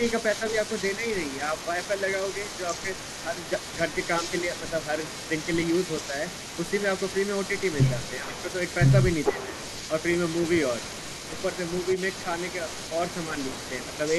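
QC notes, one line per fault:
throughout, echo leak: a faint copy of the speech trails 441 ms behind, about 20 dB down, likely a speakerphone's echo canceller letting its mic pickup through.
0.97–1.02, 8.2–8.48, 9.32–9.51, 13.29–13.55 s, speech suppressed in double talk: short level dips of a few dB, deepest around 10 dB at 8.2 s, likely the canceller ducking its own talker along with the echo while both sides overlapped.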